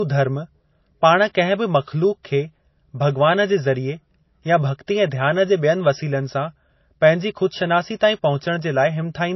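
From start to finish, the speech has nothing above 5.8 kHz. It sounds dull, and the first encoding's artefacts remain. The likely cause is low-bitrate audio saved at a high bitrate. The cut-off fits a first MP3 pass near 24 kbit/s. Re-encoding higher cannot restore what that removed.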